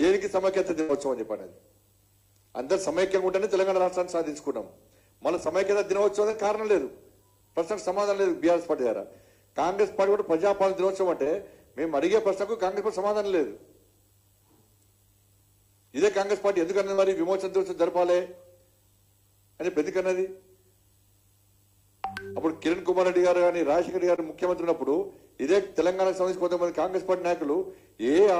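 At 0.81 to 0.91 s a burst of packet loss removes about 80 ms of audio. The receiver stretches the last sound for roughly 70 ms while fading it, producing a held buzz or fading hiss before playback jumps ahead. That sustained fade distinguishes it from the briefer losses.

Short concealed packet loss follows at 6.31, 11.24, 16.94 and 24.16 s. Each drops 20 ms, or 40 ms at 16.94 s. The gap is patched by extrapolating the preceding sound and blending back, heard as a quick smear or wobble rather than an audible fade.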